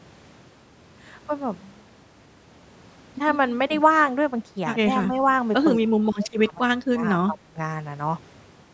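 An echo canceller likely mistook this talker for loudspeaker echo while both sides spoke, producing speech suppressed in double talk. The speech dips by up to about 20 dB from 5.79 to 6.63 s, then briefly dips again at 6.89 s and again from 7.27 to 7.58 s.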